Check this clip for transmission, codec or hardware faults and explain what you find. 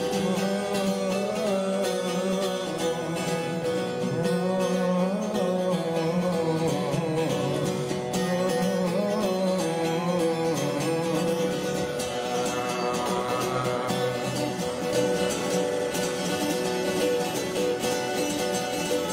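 Two faults appear in the last few seconds.

From 14.93 s to the end, a full-band echo trails the sound by about half a second at roughly equal loudness, with no decay or room colour, and it cuts in abruptly. This is a doubled audio track, likely a second, slower capture path mixed in alongside the original.

At 15.68 to 15.85 s, a short stretch stutters, replaying the same fragment. These are repeated frames: a block of about 85 ms was sent or written again, adding about 0.17 s to the audio.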